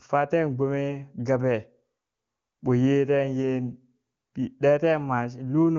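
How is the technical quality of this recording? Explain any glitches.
Nothing stood out on listening to this speech recording, which has the bandwidth of an HD Voice call, with no content above about 7.2 kHz.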